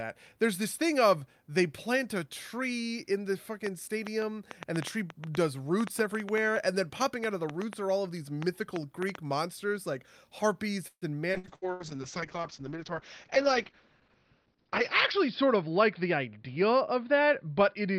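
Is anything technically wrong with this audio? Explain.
Yes, there are four kinds of fault.

From 3.67 to 9.16 s a train of clicks, around 30 irregular pops at about 5.1 per second, peaks about 10 dB above the speech. It is likely interference from nearby equipment. Unlike packet loss, the ticks sit on top of the sound, even in pauses, and remove nothing.

From 10.87 to 11.83 s repeated packet loss (robotic sound) leaves four holes, the longest 143 ms. About a third of that stretch is patched by continuing the last sound, so the audio turns choppy with pieces missing rather than clicky.

A call bitrate drop runs from 11.37 s to the end. The encoder falls from 48 to 7 kbps, and bandwidth narrows from 20 kHz to 6 kHz. The result is rough and muffled but continuous, not choppy.

The jitter buffer speed-up at 14.53 to 14.69 s (120%) and 15.16 to 16.62 s (107%) trims pitch periods to shed excess delay. 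The speech hurries at unchanged pitch: a change in timing, not in tone.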